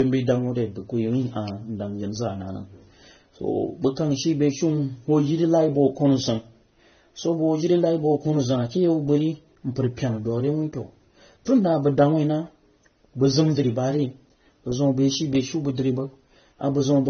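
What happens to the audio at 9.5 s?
At 9.5 s you're hearing transcoding between lossy codecs, which runs through the whole clip. Nothing survives above about 6.3 kHz, and two flavours of smeary, swirly artefacts sit on top of each other, likely from a low-bitrate encode re-encoded by a second codec.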